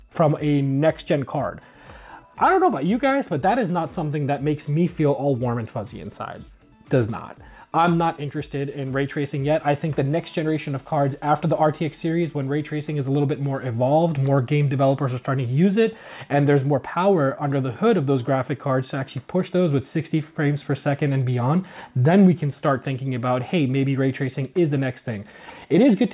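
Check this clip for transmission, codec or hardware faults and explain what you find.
No transmission, codec or hardware faults can be heard anywhere in the clip. There is nothing to point to a fault in the chain that carried or recorded the sound.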